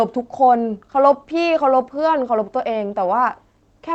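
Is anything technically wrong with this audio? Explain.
No, nothing is technically wrong: the speech comes through an Opus call path whose expected band limit near 8 kHz and ordinary coding texture are normal for that route, not faults.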